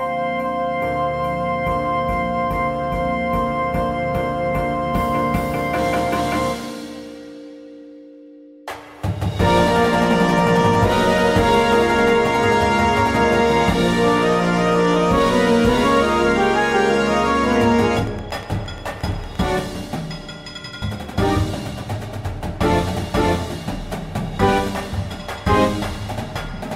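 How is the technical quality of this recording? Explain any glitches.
The recording has one clear glitch. From 13.17 to 19.6 s, a train of clicks ticks regularly at 8.6 per second, likely from interference. The clicks show as evenly spaced waveform spikes and thin vertical spectrogram lines, reaching about the sound's own level.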